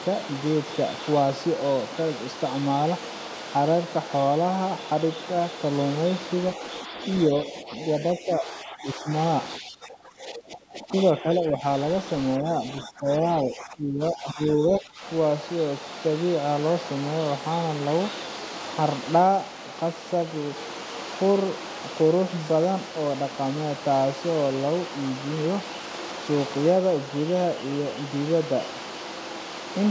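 Speech that drops in level in bursts at 7.53 to 7.7 s, 8.16 to 9.09 s, 9.59 to 11.64 s and 12.4 to 15.02 s, sinking by up to around 20 dB at worst. This is likely speech suppressed in double talk, with the echo canceller ducking this talker while the far end spoke. The call microphone processing keeps the band below 8 kHz.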